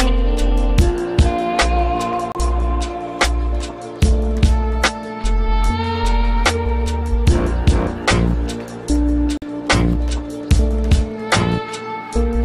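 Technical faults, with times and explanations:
2.32–2.37 s and 9.37–9.48 s, Bluetooth dropout: sound cuts to silence, then resumes further along, likely late packets being discarded, which fits two to three lost frames.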